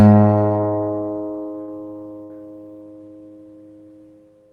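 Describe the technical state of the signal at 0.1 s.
At 0.1 s the audio is intact, with nothing at that moment beyond the ordinary coding character and the treble limit of about 12 kHz from the call path it passed through.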